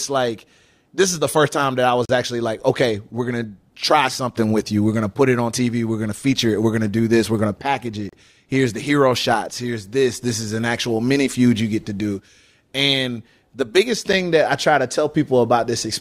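Gaps between stream segments: mismatched timestamps leave holes every 6 s that the player fills with hard-edged silence, at 2.05–2.09 s, 8.09–8.13 s and 14.13 s, without losing any speech.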